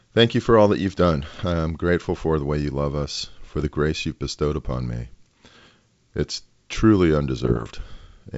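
Bit errors on an ADPCM link at 1.32–1.43, 3.43–3.67, 5.62–5.66 and 7.45–7.76 s disturb the G.722 decoder's step size and predictor, producing pops and rough bursts with brief level shifts.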